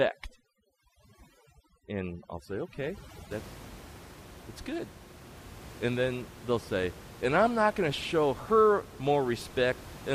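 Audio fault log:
0.00–3.31 s, overdone noise removal: lowered background breaking up into twinkling specks, as aggressive noise reduction gates bands near its noise estimate.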